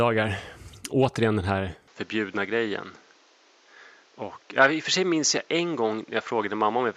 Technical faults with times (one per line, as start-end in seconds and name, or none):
1.88-6.96 input switched to a poorer device